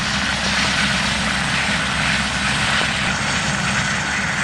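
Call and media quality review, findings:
Loud pop, 0.46–0.67 s: likely a voltage transient from a plug, switch, static discharge or driver glitch, passed through and shaped by later circuitry. Heard as two sharp pops in quick succession, about 10 dB above the signal, with the sound continuing underneath.

Loud pop, 2.82–2.84 s: same likely transient mechanism, a single brief pulse. Heard as one sharp pop, about 15 dB above the signal, over uninterrupted audio.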